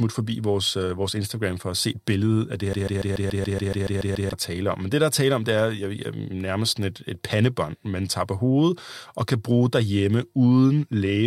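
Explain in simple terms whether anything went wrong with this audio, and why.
After "se billedet af det", from 2.73 to 4.33 s, a 0.14-second snippet repeats 11 times until "er tale om". This broken-record loop was likely caused by playback stalling and replaying its last fragment, losing the audio in between.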